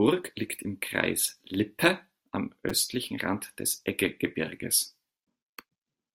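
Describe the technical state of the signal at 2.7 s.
A repeated buffer occurs at 2.69 s. Audio arrived late, so one piece of about 5.3 ms, which fits a 256-sample buffer, played three extra times. It is heard as a brief click-like buzz. The waveform shows identical cycles, and the spectrogram shows thin vertical streaks at the joins.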